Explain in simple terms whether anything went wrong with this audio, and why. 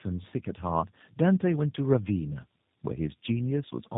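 Tandem speech coding runs through the whole clip: the speech was squeezed by two phone coders in turn, so it sounds rougher and more warbly than one coder alone.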